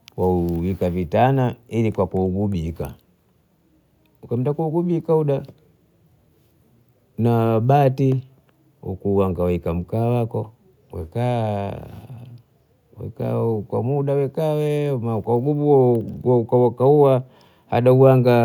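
No audible technical faults turn up anywhere in this recording.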